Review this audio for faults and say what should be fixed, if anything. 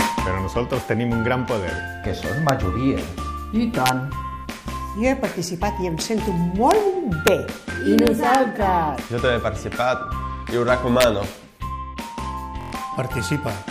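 Integer overflow cracks hit at 2.49, 3.86 to 3.89, 6.71, 7.27, 7.99 to 8.35 and 11.01 to 11.04 s: peaks only about 0 to 1 dB over full scale wrap to the opposite sign instead of limiting, giving sharp snaps. Clamp or saturate the sum before converting to integer.

At 12.61 to 12.73 s there's a system hang loop, a 23.22 ms chunk repeating five times at 43.1 Hz as a brief buzz, which fits a 1024-sample buffer, and around a tenth of a second of audio goes missing. Keep the audio thread from stalling, or have the driver output silence when the feed stops.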